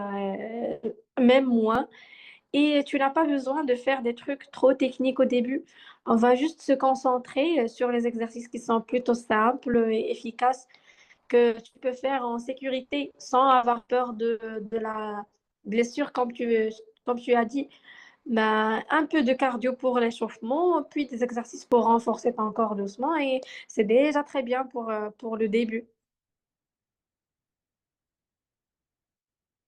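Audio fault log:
1.75 s, 9.74 s, 17.73 s, 21.72 s: overlap between stream segments. Each time, the timestamps of adjacent 4-second segments overlap, so the player trims roughly 4 to 13 ms of speech that was never actually duplicated, and the waveform jumps abruptly, producing a brief click or skip.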